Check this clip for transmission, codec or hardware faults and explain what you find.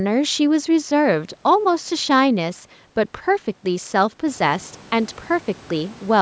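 No fault can be heard in the speech: the band ends at 8 kHz, as expected from call microphone processing, and the room noise rises by about 12 dB from around four and a half seconds in but stays about 28 dB below the speech.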